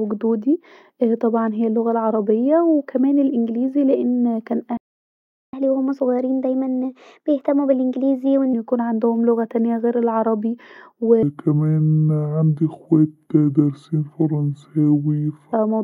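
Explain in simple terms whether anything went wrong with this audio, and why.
A few things go wrong in this speech clip, and the first two are connected.

First there's a playback stall. Right after "وكمان الانجليزي لأن كان", the sound drops out at 4.77 s and stays silent for about 0.76 s, until 5.53 s. The likely cause is the player running dry of data or getting held up for a moment.

Then comes catch-up at higher speed. From 5.53 to 8.53 s the player runs at about 1.15 times normal speed to win back that lost time, so the speech sounds hurried and roughly two semitones higher. It settles back to normal just before "عندهم لغه تانيه غير".

Later there's a section at the wrong speed. From 11.23 to 15.53 s, ending just before "موضوع اللغة ده", the audio runs at about 0.66 times normal speed, so it drags and sounds deep, around seven semitones lower. This is likely down to that stretch being played against the wrong clock.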